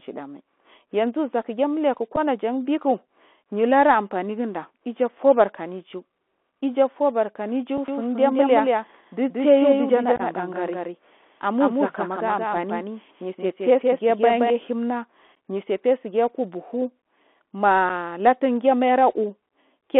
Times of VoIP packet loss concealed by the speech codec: none

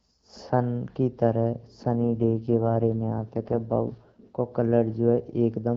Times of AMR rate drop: 1.92-4.28

